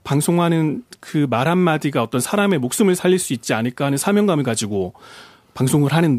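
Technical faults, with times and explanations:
2.51–3.12 s, CD scratch ticks: four small, evenly spaced clicks cut across the speech, roughly six or seven a second, each less than a millisecond long. The regular spacing matches one turn of the disc. At the same point on each turn, a scratch or blemish wiped out more data than error correction could rebuild, so the player filled or muted those few samples, leaving a brief tick each time.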